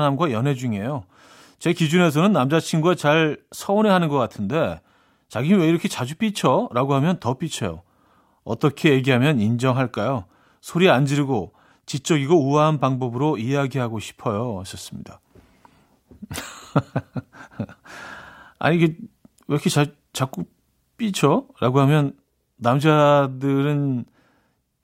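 No technical faults can be heard anywhere in the speech recording; the signal stays continuous and steady throughout.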